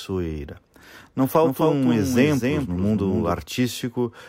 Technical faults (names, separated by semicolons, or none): doubled audio track